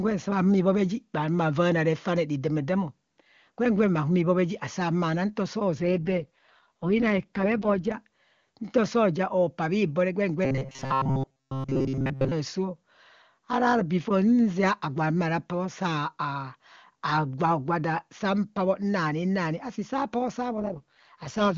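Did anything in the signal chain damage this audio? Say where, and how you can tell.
Yes. AMR rate drop, 5.77 to 7.92 s (right after "nto soo") and again from 20.6 s to the end: this is a network and codec stage fault. The speech turns rougher and more synthetic while the bandwidth stays the same and nothing drops out. That pattern fits the AMR-WB encoder being pushed from its clean 23.85 kbit/s mode down to 6.6 kbit/s. At that rate far fewer bits go to the vocal tract model and excitation, so the voice sounds raspy until the rate recovers.

Robotic sound from repeated short buffers, 10.45 to 12.32 s (following "bhibo re gwen"): this is a driver or buffer stage fault. The speech becomes a rigid metallic buzz at 133 Hz that still roughly tracks the syllables. A fixed pitch like that means one segment of about 7.5 ms is being replayed over and over. Most of the real audio in that stretch, around seven tenths, is skipped. 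The likely cause is new buffers arriving too seldom, with the software looping the last one to fill the gap.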